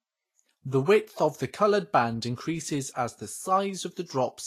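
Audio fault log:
Throughout, Vorbis compression: the speech sounds hissy and grainy, and nothing reaches above 14.2 kHz. This is likely a low-bitrate Vorbis encode, near 33 kbps. Fine treble detail is quantised so coarsely that it turns into noise of similar energy, roughening tones and blurring attacks.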